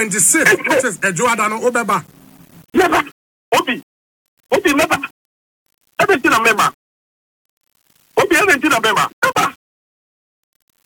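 Low bit depth without dither runs through the whole clip. Quiet passages sound grainy, and the grit shifts with the sound. The error sits roughly 35 dB below the signal. The likely cause is plain 8-bit rounding.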